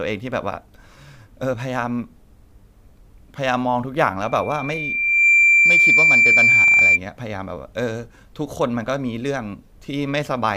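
From 4.21 s to 7.00 s a single tone at 2.4 kHz swells over about a second into a piercing squeal roughly 10 dB above the speech. This is loudspeaker feedback squeal: the microphone hears its own loudspeaker, and at 2.4 kHz the loop gain exceeds one.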